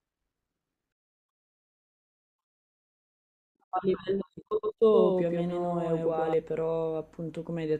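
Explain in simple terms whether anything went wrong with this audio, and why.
From 4.51 to 6.34 s the speech has a doubled audio track: a second copy plays about a tenth of a second behind, just as loud. Unlike an echo, it never fades or sounds roomy, and it switches on and off abruptly, likely from the audio being captured twice.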